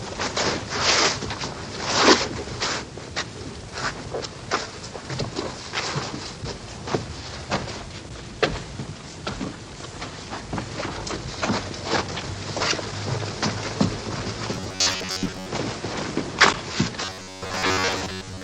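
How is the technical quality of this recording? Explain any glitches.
Two stretches of robotic sound from repeated short buffers, from 14.54 to 15.50 s and from 17.05 s to 18.44 s, at the very end. In both, the sound turns into a rigid, metallic buzz locked at about 94 Hz that only loosely tracks the material beneath it. This is likely audio arriving too slowly for playback: a chunk of about 10.7 ms is looped to fill the gaps, setting the fixed pitch, while most of the real audio is skipped.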